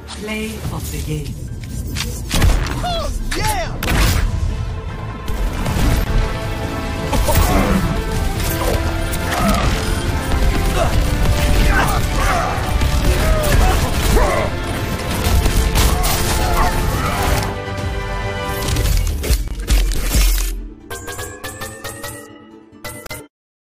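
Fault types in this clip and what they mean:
Gap at a join of encoded pieces: separately encoded sections were joined without trimming each encoder run's start-up delay and final-frame padding, so brief silences of 25, 29 and 39 ms break the continuous sound, with slightly smeared edges, before it resumes where it stopped.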